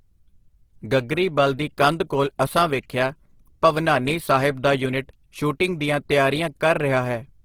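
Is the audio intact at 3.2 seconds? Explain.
No. Throughout the clip, including at 3.2 seconds, the audio shows likely Opus compression in its music (CELT) mode, with damage plain enough to suggest a low rate near 16 kbps. Short of bits, the encoder preserves each band's energy but refills the detail with copies of lower bands or with noise. The bandwidth stays full, reaching about 20.2 kHz, yet the speech comes out rough, grainy and noisy in texture.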